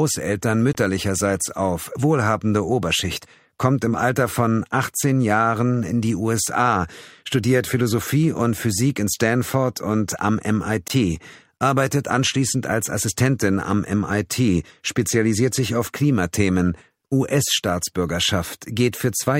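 Twice the audio cuts to a brief silence of about 20 ms, at 0.73–0.75 s and again at 10.88–10.90 s, then picks up further along as if it had kept playing. This is likely a Bluetooth dropout, each gap fitting a single lost packet.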